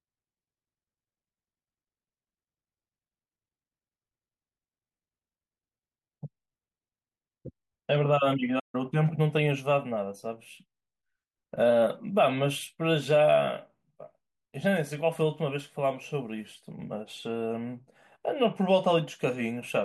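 At 8.59 s the speech drops out in a playback stall, silent for about 141 ms until 8.75 s, likely the player starving for data before resuming.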